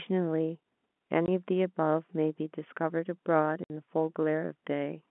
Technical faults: packet loss filled with silence

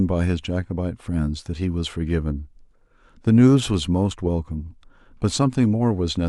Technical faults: none

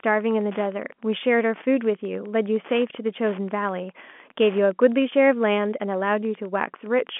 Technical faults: Wi-Fi interference

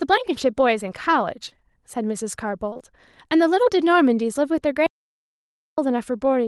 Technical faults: short concealed packet loss; audio dropout to silence

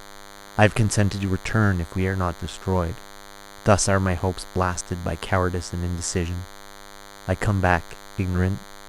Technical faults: DECT cordless phone buzz

